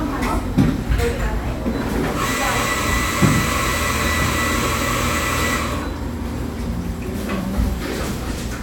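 No technical faults can be heard anywhere in this recording of sounds. The audio continues without any event that would point to a problem in how it was captured or delivered.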